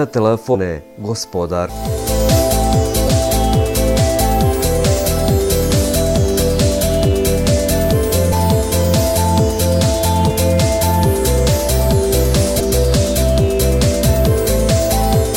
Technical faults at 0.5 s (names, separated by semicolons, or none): damaged data in a compressed stream